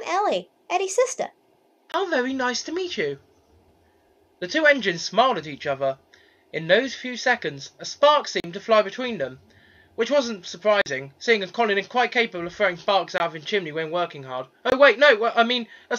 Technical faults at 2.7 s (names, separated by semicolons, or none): none